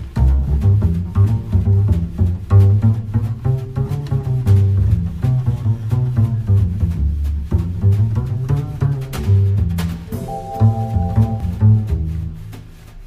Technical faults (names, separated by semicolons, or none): damaged data in a compressed stream